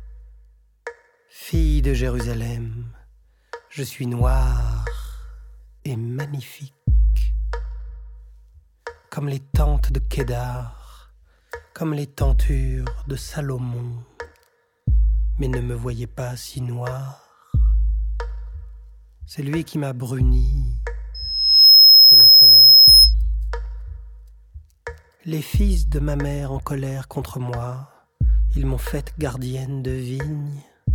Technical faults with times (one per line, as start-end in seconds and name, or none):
21.14-23.14 loudspeaker feedback squeal